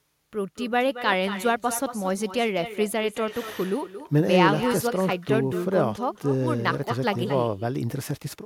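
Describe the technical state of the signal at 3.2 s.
At 3.2 s the speech is shadowed by an echo with no canceller, a fault present across the whole clip. The far end plays the call through a loudspeaker. Its microphone picks that sound up, and nothing subtracts it before it is sent back. So each syllable returns about a fifth of a second later. The copy sits about 12 dB below the direct speech. It sounds thinner, a quieter trailing double.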